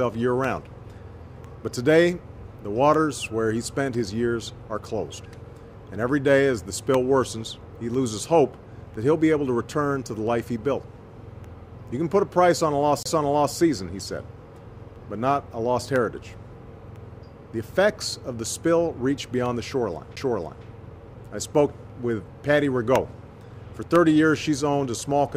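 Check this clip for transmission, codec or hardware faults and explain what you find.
Two CD skips occur, at 13.03 to 13.06 s and at 20.16 s. The laser jumps to another turn of the disc's spiral. Playback mutes for roughly 30 ms and then a few milliseconds, then resumes elsewhere. Each is heard as a tick and a jump in the sound. On a waveform, each shows as a brief flat gap followed by a discontinuous restart. A spectrogram shows a thin vertical click line.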